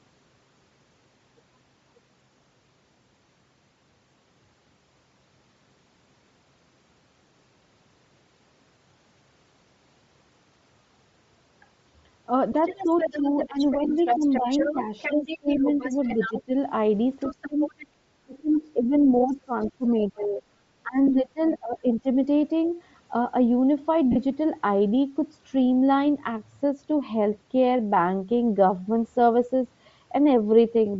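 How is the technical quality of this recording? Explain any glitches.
Quality is compromised by coding artefacts throughout and several echo-control faults between 12.5 and 22.7 s.

Bluetooth LC3 compression is plainly audible across the whole clip as a breathy, grainy upper band. It is likely low-bitrate LC3 filling the discarded spectrum with noise.

The other side's voice leaks through from 12.52 to 16.41 s at roughly 5 dB below the speech, then from 17.2 to 17.87 s, from 19.17 to 19.66 s and from 22.67 to 22.71 s, each progressively fainter. This is likely residual loudspeaker echo that the canceller missed.

Speech is suppressed in double talk from 12.71 to 16.52 s, dipping up to about 15 dB for roughly a second in total. It happens again from 17.43 to 22.06 s, dipping up to about 25 dB for about three seconds. The canceller likely ducked the talker along with the echo.

Lost LE Audio frames at 24.12 to 24.16 s cover 37.5 ms, which fits five 7.5 ms frames concealed from the previous spectrum.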